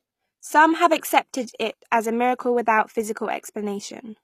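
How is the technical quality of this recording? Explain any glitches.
The recording has two faults: audible low-bitrate coding damage throughout, and one pre-echo smear near the one-second mark.

HE-AAC compression runs through the whole clip. The likely cause is an HE-AAC encoder at a low bitrate, with damage consistent with roughly 24 kbps. The codec spends its bits on the lower spectrum and synthesises the upper bands by copying lower content upward, so the treble sounds artificial. Sibilants in the speech turn gritty and metallic, and nothing comes through above 15 kHz.

Pre-echo occurs from 0.98 to 1.03 s. A sharp onset landed late within a transform block, and the encoder spread quantisation noise sized for that loud attack across the whole block, including the quiet stretch before it. The result is about 48 ms of hiss leading into the attack, which itself sounds softened and smeared rather than crisp.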